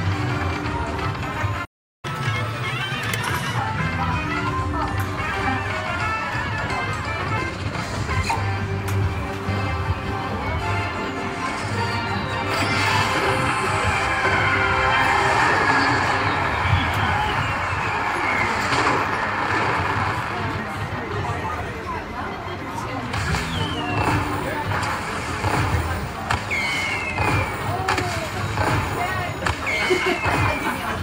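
At 1.64 s the audio cuts out and stays silent until 2.05 s, a gap of about 0.38 s. This is a playback stall, most likely the player running short of buffered data or its output thread being held up. What separates it from a dropout or lost packet is the length and cleanness of the hole: a stretch of true silence far longer than a few milliseconds, after which the sound resumes where it stopped rather than skipping ahead.

From 2.05 s to 3.59 s the player works off its backlog through catch-up at higher speed, running at 1.25 times normal rate by resampling. Because speed and pitch move together, everything sounds hurried and noticeably raised, by around four semitones, before settling back to normal at 3.59 s. Unlike time-stretching, which keeps pitch steady, or a sample-rate mismatch, which persists for the whole clip, this shift is brief and immediately follows the silence.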